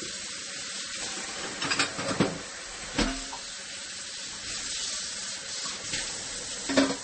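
Throughout, the sound is watery and swirly with smeared attacks and nothing above 8.4 kHz, likely MP3 compression at a low bitrate around 32 kbps.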